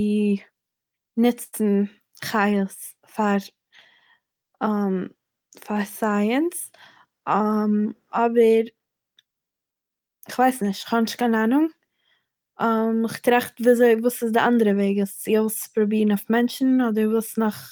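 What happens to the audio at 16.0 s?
Nothing goes wrong at 16.0 s; the speech carries on intact through that moment, with no break, glitch or change in level.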